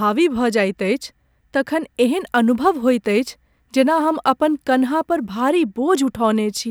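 From 2.10 to 5.38 s the speech carries sample clock jitter: the converter's timing wanders by a few microseconds, so steep parts of the waveform land wrongly, adding roughness around 35 dB below the speech. Unlike a steady noise floor, it swells on loud, bright sounds and disappears in pauses.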